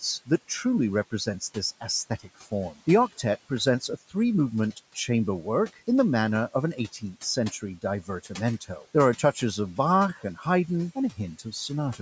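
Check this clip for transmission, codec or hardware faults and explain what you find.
One fault recurs: speech cut by the noise suppressor. It happens at 1.11 to 2.74 s, 3.5 to 4.13 s, 6.77 to 9.37 s (just after "the manner of an"), 10.14 to 10.46 s and 10.95 to 12.0 s. The suppressor mistakes parts of the speech for background and turns them down by about 10 to 16 dB. Brief stretches, about 0.1 to 0.4 s in total per event, sound swallowed or faint.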